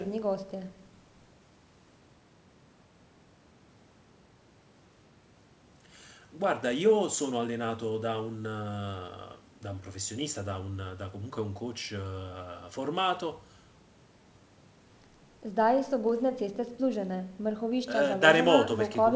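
Speech with no technical faults.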